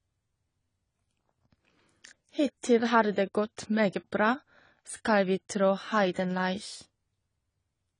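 Speech sounds dull and smeared throughout, with nothing above 10 kHz and plainly audible warbling on sibilants, the likely result of AAC compression at a low bitrate near 24 kbps.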